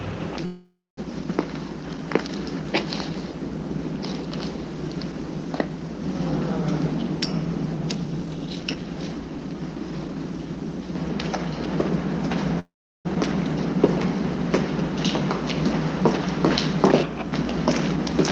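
A call audio freeze at 0.45 to 0.99 s stops the sound mid-flow. The last fragment is stretched into a fading buzz and then about 0.21 s of silence before the sound picks up exactly where it left off. Nothing is lost, but roughly 0.52 s of gap has been inserted. The same happens at 12.59 to 13.07 s, with a longer silent stretch of about 0.37 s inside a 0.45 s hold. In both cases the likely cause is delayed packets draining the jitter buffer, so the receiver had to invent filler until they arrived.

A jitter buffer speed-up runs from 7.95 to 10.34 s. The sound plays at about 121% of its normal rate while keeping its pitch, so the everyday sounds here come across as hurried and rhythmically compressed. After a backlog of audio built up, the receiver trimmed many tiny pitch-period slices in quick succession, shaving roughly half a second off to bring the delay back down.

Throughout, the high end stops near 8 kHz, consistent with an Opus call link at a modest bitrate.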